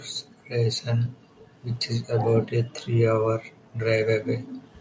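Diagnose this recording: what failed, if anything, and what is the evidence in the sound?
Background gated by the echo canceller at 1.21–1.46 s, 3.58–3.79 s and 4.45–4.8 s: call processing's echo canceller clamped the microphone, dropping room sound by about 40 dB.

Echo leak at 1.46–1.51 s: a very faint copy of the speech, delayed by 393 ms, likely escaped the far side's echo canceller during call processing.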